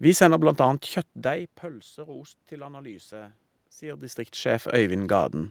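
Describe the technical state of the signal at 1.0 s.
At around 1 s the signal is intact, with only a change in level as the talker shifts position relative to the microphone, which is a natural feature of the recording and not a fault.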